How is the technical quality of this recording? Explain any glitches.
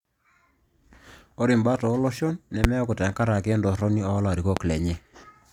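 The recording has two loud pops. The first hits at 2.64–2.67 s, between "imbat ooloshon" and "tenkaraki entorroni". The second lands at 4.57–4.59 s, just after "tenkaraki entorroni". Each is a single sharp crack around 20 dB above the speech, which carries on underneath. That's likely a voltage spike from a switch, connector or static that got shaped by the downstream circuitry.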